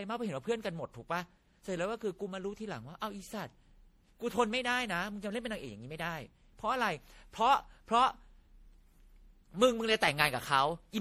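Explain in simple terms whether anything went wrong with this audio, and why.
Something did go wrong, and it runs through the whole speech clip rather than at one moment. The sound is swirly, hollow and smeared, and the start of each sound is blurred. That points to generation loss, most likely from the audio being saved as MP3 around seven times over. Each pass throws away a bit more detail and adds its own grit. Unlike a single heavily squeezed file, the damage has piled up, so it sounds worse than one rough save would.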